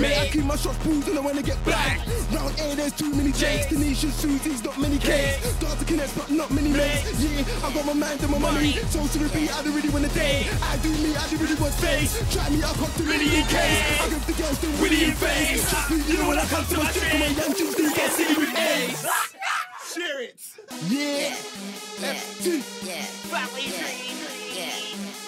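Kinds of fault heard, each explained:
Nothing here stands out as a technical fault; the audio just runs along without any glitches, dropouts or distortion to point to.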